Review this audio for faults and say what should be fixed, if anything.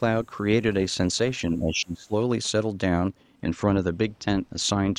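From 1.51 to 2.14 s the speech sinks by about 20 dB. This is speech suppressed in double talk, likely from an echo canceller mistaking near-end talk for echo. Tune the canceller's double-talk detection so it eases off suppression whenever the near-end talker is active.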